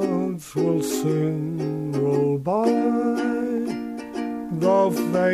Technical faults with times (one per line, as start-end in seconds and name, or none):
0.00-5.33 low bit depth without dither